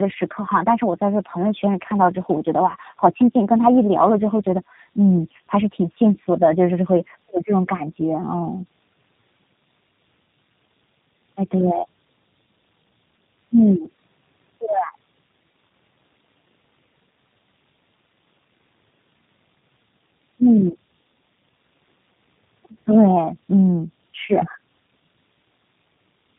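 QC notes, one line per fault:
throughout, tandem speech coding: the speech has passed through two low-rate speech codecs in a row, consistent with AMR-NB near 7.95 kbit/s followed by G.729A at 8 kbit/s. The second coder re-encodes the first one's artefacts, leaving rough, muffled, warbly speech with nothing above 3.8 kHz.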